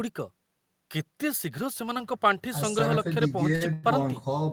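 At 3.55 s the speech briefly hangs in a short stall from a late packet: one packet missed its playout time, the jitter buffer emptied, and the last sound was stretched for about 55 ms until it arrived. Nothing is lost, but everything after runs 55 ms later.

From 3.73 to 3.86 s there is a call audio freeze. The sound is held as a fading buzz or hiss for about 102 ms without reaching silence, then resumes where it stopped, adding a further 102 ms of delay. This is likely packets held up in transit draining the jitter buffer.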